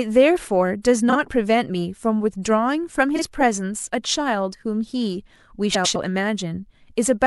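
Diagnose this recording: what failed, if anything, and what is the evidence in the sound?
Frames out of order at the network stage: adjacent frames were decoded swapped, giving garbled flutters at 1.09–1.16 s, 3.16–3.22 s and 5.74–5.96 s.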